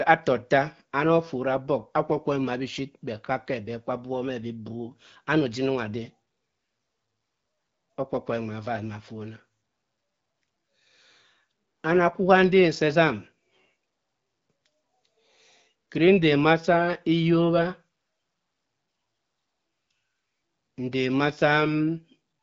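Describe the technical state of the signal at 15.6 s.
At 15.6 s the speech is intact, with no dropout, click or distortion, and the wideband top typical of an AMR wideband (HD Voice) call path sounds as expected at that point.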